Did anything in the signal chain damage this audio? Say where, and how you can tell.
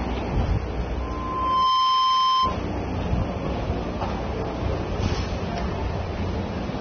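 Yes. At the codec stage, the whole clip shows plainly audible damage, likely from AAC compression at a low bitrate that fits AAC-LC around 24 kbps. Nothing remains above 6.3 kHz, so the audio sounds dull and band-limited, with the top octaves simply gone.

In the acoustic and analogue path, a microphone picked up the loudspeaker it fed, and the loop gain rose above one at 1 kHz, producing a loudspeaker feedback squeal from 1.00 to 2.61 s. The 1 kHz tone swells over roughly 0.7 s to sit about 5 dB above the audio.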